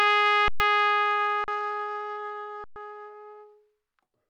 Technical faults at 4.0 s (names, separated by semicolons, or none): none